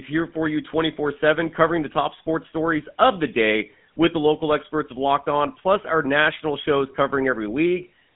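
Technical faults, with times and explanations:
Throughout, GSM full-rate codec: the speech has the buzzy, gravelly roughness of the original GSM codec, which fits a 13 kbps stream. It models the vocal tract as a filter and excites it with regularly spaced pulses, so fine detail in the excitation is lost and voicing turns grainy. The line band runs from about 150 Hz to 3.4 kHz. On a spectrogram, energy stops sharply near 3.8 kHz, with nothing above.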